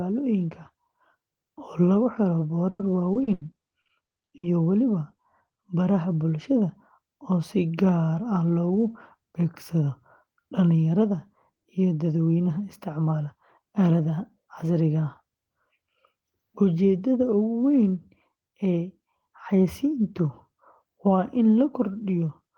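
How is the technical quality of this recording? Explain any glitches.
The recording has one glitch, a burst of repeated packet loss (robotic sound) from 2.69 to 4.45 s. Across that stretch, eleven pieces of the speech stream failed to arrive in time, the longest about 100 ms, and each hole was filled by extending the sound just before it. With roughly a quarter of the span patched this way, the speech turns choppy, with fragments missing.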